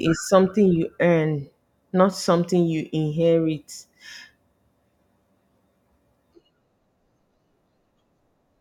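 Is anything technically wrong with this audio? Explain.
No, nothing technically wrong is audible in this speech recording.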